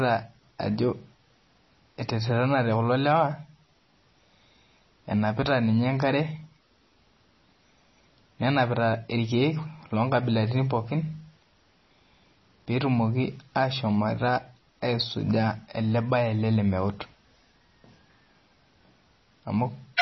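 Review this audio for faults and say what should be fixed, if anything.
Throughout, likely heavy MP3 compression, consistent with about 24 kbps, removes everything above 5.9 kHz and toggles weak frequency lines, leaving the speech dull and watery. Keep a lossless or higher-bitrate master so the encoder is never starved of bits.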